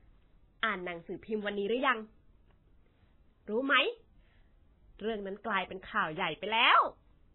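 From start to finish the speech carries heavy MP3 compression artefacts. Nothing is heard above 4 kHz, so it sounds dull and muffled. Weak frequency content flickers in and out, giving a watery, swirly texture. S sounds chirp metallically. This likely points to a very low bitrate, around 16 kbps.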